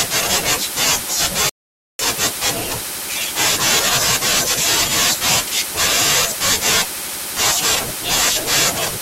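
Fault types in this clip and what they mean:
Rebuffering stall: the playback ran dry of downloaded data and halted until the next chunk arrived, so the speech drops to silence at 1.49 s and picks up again at 1.99 s from the exact point where it broke off. No audio is skipped or repeated; the gap simply inserts about half a second of dead air, which stretches the timeline and shifts everything after it later by that amount.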